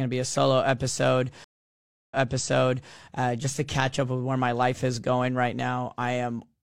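At 1.44 s, after "be a solo episode", the connection broke and the player reconnected with a fresh decoder, a stream reconnect. About 0.67 s of silence follows, then playback resumes 0.84 s earlier, repeating material until "uh just to catch" near 2.95 s.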